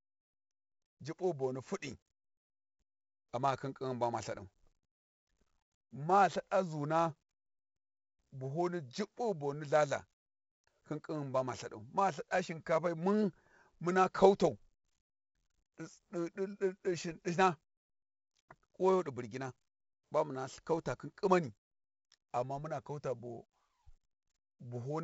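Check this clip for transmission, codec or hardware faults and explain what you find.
The speech carries one codec fault, 4-bit ADPCM compression, and it runs through the whole clip. Each sample is stored as a coarse 4-bit step from a predicted value, with the step size adapting as it goes. The damage is heavy here. A gritty hiss rides on every loud syllable and tracks its level. Sharp onsets smear and distort. Nothing reaches above 7.7 kHz, which fits a 64 kbps stream at a 16 kHz sample rate and dulls the top end.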